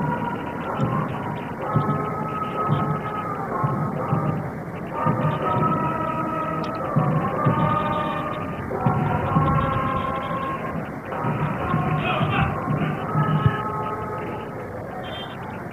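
No dropouts, clicks, distortion or timing glitches turn up anywhere in the recording.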